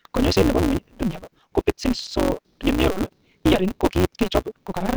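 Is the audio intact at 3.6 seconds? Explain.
No. A block size mismatch (truncated) runs throughout. Each block's end is dropped, which fits 256-sample reads. This leaves a 188 Hz buzz and speech running 1.88 times fast.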